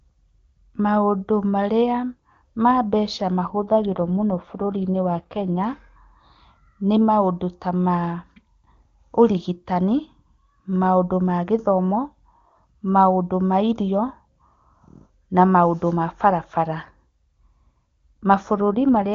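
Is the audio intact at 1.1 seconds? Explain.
Yes, the speech at 1.1 seconds is intact, carried cleanly by the AMR wideband (HD Voice) codec at 23.85 kbit/s with no more than faint coding damage.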